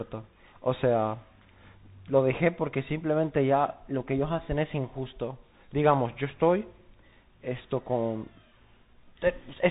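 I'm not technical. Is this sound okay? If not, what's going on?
No. The whole clip has passed through a Bluetooth CVSD headset codec, the narrowband link used by headsets. It keeps nothing above about 3.8 kHz, so the speech sounds muffled and phone-like. S sounds turn scratchy, and a grainy hiss sits underneath throughout.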